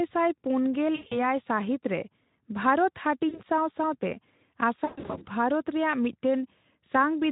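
At 0.95 to 1.20 s, 3.29 to 3.41 s and 4.85 to 5.28 s, VoIP packet loss concealed by the speech codec stretches the speech into a buzzy tone or a coloured noise that fades. About 140 ms, 40 ms and 280 ms go missing, the last scattered over 400 ms with a longest run of 120 ms. Unlike a plain dropout, the gaps are filled with decaying extrapolation rather than silence, and the voice stays weak briefly after each one. The Speex coding around them is light.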